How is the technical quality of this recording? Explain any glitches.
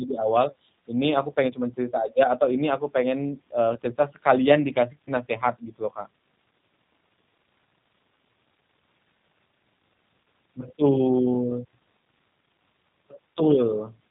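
The quality is limited by low-bitrate telephone-style coding that runs through the whole recording. The speech passed through a G.729 codec, which does not store the waveform. It rebuilds each 10 ms frame from a vocal tract filter, a pitch predictor and a few pulses, which fits an 8 kbit/s VoIP link. The damage is plainly audible: nothing reaches above 3.8 kHz, so consonants lose their crispness, and the rebuilt excitation gives the speech a rough, slightly synthetic buzz.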